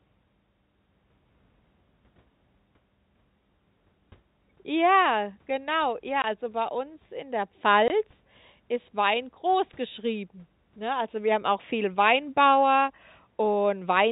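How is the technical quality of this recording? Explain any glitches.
The recording has two brief dropouts, both packet loss filled with silence, heard over telephone-band sound with the dull 4 kHz ceiling of G.711 coding.

At 6.22 to 6.24 s, just before "also bei uns in", and at 7.88 to 7.90 s, just after "bei uns in der", the sound cuts to dead silence for 20 ms. Each gap fits one missing 20 ms packet that the receiver replaced with zeros rather than concealing. A concealed loss would smear or repeat the preceding sound instead of leaving a clean hole.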